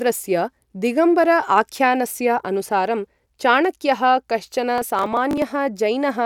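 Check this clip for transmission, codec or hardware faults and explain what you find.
Processor overload crackle runs from 4.78 to 5.42 s. The processor missed its deadlines for short buffers of around 5 ms, skipping roughly twenty of them, each leaving a hard-edged gap. Together these tear through the speech as gritty crackle until the load passes.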